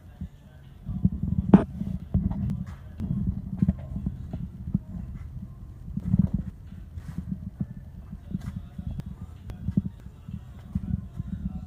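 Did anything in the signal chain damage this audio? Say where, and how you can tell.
Yes. Chunks out of order at 2.0–3.0 s, 6.0–7.0 s and 9.0–10.0 s at the buffer stage: each span has two 500 ms blocks swapped, heard as a jumbled second with hard joins at its start, midpoint and end, where a block written one slot late breaks continuity.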